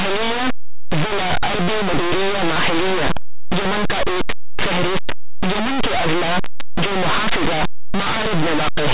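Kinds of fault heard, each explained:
Linear audio read as companded: The speech was stored as plain linear 8-bit samples but decoded throughout as mu-law codes, so each byte passes through an expansion curve it was never meant for. Small values just to one side of zero become near-maximum outputs, while those on the other side remain small. The result is a constant, very loud, harsh distortion from start to finish, even though the 8-bit storage itself is sound.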